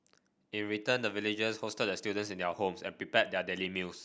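No technical faults can be heard anywhere in this speech recording.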